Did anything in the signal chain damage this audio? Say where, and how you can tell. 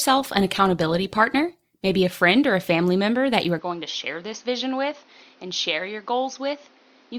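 Yes. In the network and codec stage, the adaptive stream started at a low bitrate. From 0 to 2.0 s the speech has thin, partly synthetic treble and heavier codec artefacts, which fits Opus at about 24 kbit/s. At 2.0 s it steps up, consistent with 64 kbit/s, with no gap.

At the input stage, from 3.59 s, right after "member that you are", the speech turns dull with nothing above 6.5 kHz. It drops about 5 dB, and a new noise floor appears roughly 30 dB below it, with no silence at the change. The likely cause is the input being switched to a poorer device.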